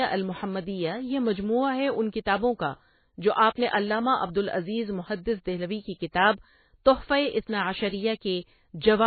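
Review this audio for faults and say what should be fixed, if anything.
MP3 compression throughout: nothing above 4.5 kHz, and the speech sounds watery as weak frequency lines flicker between frames, likely from a bitrate near 18 kbps. To prevent this, re-encode from the original source at a far higher bitrate or keep it in a lossless format.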